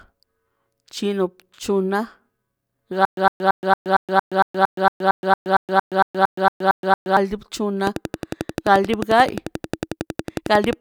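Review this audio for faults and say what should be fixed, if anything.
A stutter with silent gaps runs from 3.05 to 7.17 s: a 108 ms fragment repeats 18 times, every 229 ms, separated by 121 ms of digital silence, likely from a stalled stream replaying its last buffer. On the waveform it appears as identical blocks between flat zero lines.

A train of clicks runs from 7.87 to 10.74 s: about thirty regularly spaced clicks at 11.2 per second, peaking about 10 dB above the speech, likely from electrical interference. On a spectrogram they show as evenly spaced vertical broadband lines.

To prevent both, give the playback or streaming path enough buffering to survive stalls, and shield or relocate the recording interface away from noisy equipment.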